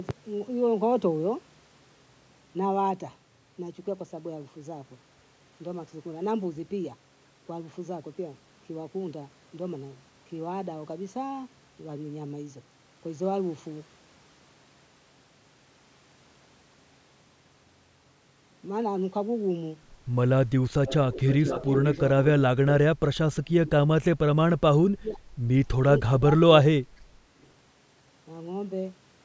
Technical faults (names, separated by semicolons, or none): echo leak; speech suppressed in double talk